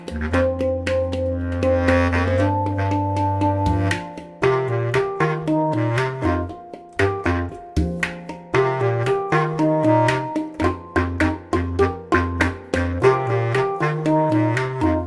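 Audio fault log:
No faults detected anywhere in the audio.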